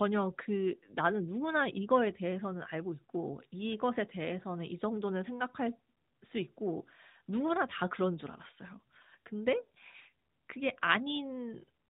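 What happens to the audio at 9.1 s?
Nothing goes wrong at 9.1 s; the speech there is intact and continues without interruption.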